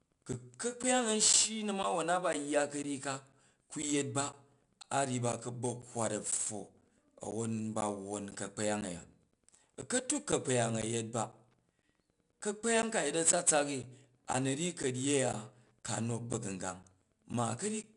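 Throughout the speech, 4-bit ADPCM compression stores each sample as a coarse step from a prediction. The quantising error rides on the level as a gritty hiss over louder passages, nothing is heard above 10.6 kHz, and the damage fits a rate near 89 kbps.

From 0.33 s to 17.84 s, periodic USB or driver dropouts stall the audio path every 0.5 s. Each time, around 10 ms of signal is lost and replaced by silence, about forty times in all, heard as a steady clock of small ticks through the speech.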